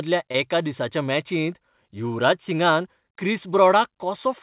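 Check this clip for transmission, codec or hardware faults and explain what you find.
There is one transmission fault. Short concealed packet loss occurs from 0.32 to 0.36 s. About 20 ms of audio arrived too late for the decoder. The receiver extended the preceding sound to fill the gap, then blended back. It is heard as a brief smear or wobble. The call codec sounds like G.711 mu-law, with nothing above 4 kHz.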